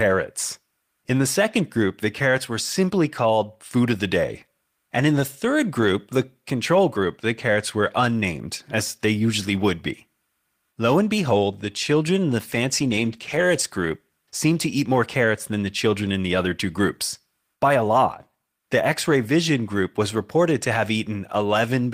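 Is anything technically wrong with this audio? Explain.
Yes. There is a call bitrate drop from 12.38 s to 15.07 s. The encoder lost bits as the bandwidth estimate fell, which fits a drop from 32 to 15 kbps. The speech turns coarse and duller, worst for about 1.1 s, then recovers.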